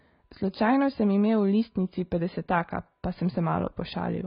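AAC compression runs through the whole clip, from the first second to the last. Nothing reaches above 5 kHz, so the speech sounds dull and boxed-in, and sibilants come out smeared and fizzy rather than crisp. The heavy damage points to a low-bitrate AAC-LC encode, likely around 16 kbps. At that rate the encoder cannot afford the upper spectrum, so it drops everything above the cut-off and spends its few bits on the strongest lower bands.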